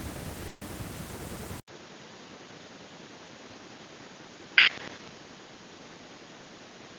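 At 0.47 s the speech breaks into a call audio freeze: a 140 ms stretch of decaying buzz-like fill runs to 0.63 s, then the speech resumes where it stopped. Nothing is lost, but everything after arrives 140 ms late, likely because delayed packets emptied the jitter buffer.

At 1.6 s an 80 ms silence marks an input switched to a poorer device. That is the likely cause, since from there to the end the speech is band-limited, with nothing above 6.9 kHz. It is also about 5 dB quieter, over a new noise floor some 45 dB below.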